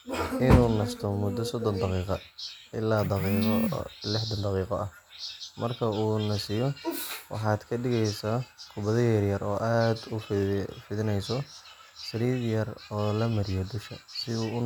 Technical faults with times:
none

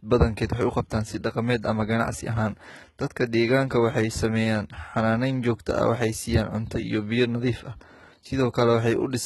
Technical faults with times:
0.00-9.25 HE-AAC compression

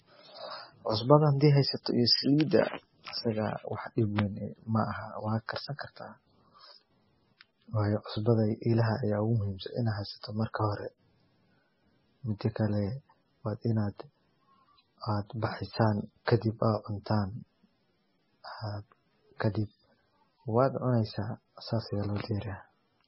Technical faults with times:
0.00-23.08 MP3 compression

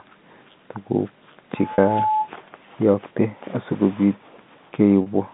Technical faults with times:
1.56-2.30 loudspeaker feedback squeal
1.74-1.78 packet loss with pitch repetition
5.02-5.06 packet loss with pitch repetition

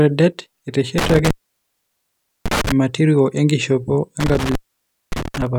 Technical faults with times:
0.98-2.72 intermittent contact
4.20-5.42 intermittent contact

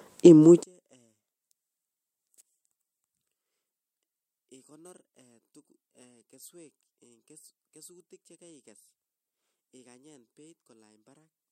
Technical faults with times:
0.63-11.51 one channel inverted

